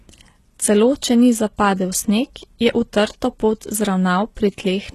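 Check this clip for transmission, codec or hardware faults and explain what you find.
Throughout, treble is resynthesized, likely HE-AAC compression, consistent with about 16 kbps: copied upper bands make sibilants gritty; spectrograms show repeated upper patches, nothing above 12.3 kHz.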